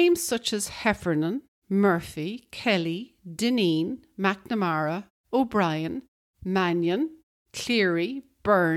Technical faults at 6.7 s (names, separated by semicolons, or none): none